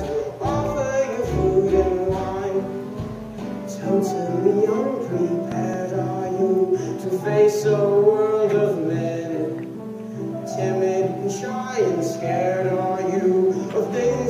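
A loud pop, actually two in quick succession, hits between 5.52 and 5.76 s, a few dB above the audio, likely a voltage spike from a plug, switch, static or driver glitch.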